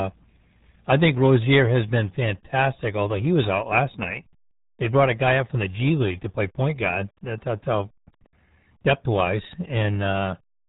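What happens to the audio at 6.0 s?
At 6.0 s, as throughout, the RealAudio 14.4 codec's squeezed, dial-up-rate coding strips everything above 3.8 kHz, leaving the speech muffled, gargly and heavily smeared.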